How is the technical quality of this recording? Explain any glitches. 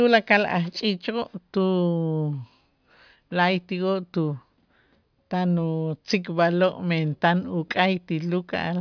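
The recording's technical quality is good: the speech signal holds steady throughout, with no glitches to explain.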